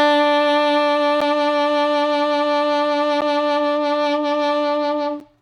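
From 1.21 s the music picks up periodic USB or driver dropouts: every 2 s, roughly 10 ms goes silent, giving a few regular ticks through 5.21 s.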